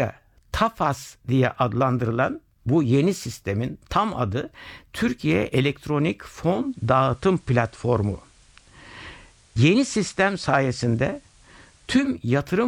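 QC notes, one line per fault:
6.46–12.26 s, digital radio blending to analogue: the receiver lost the digital stream and cross-faded over 394 ms to the FM feed. A hiss floor around 35 dB below the speech appears, and the waveform steps about 2 dB in level.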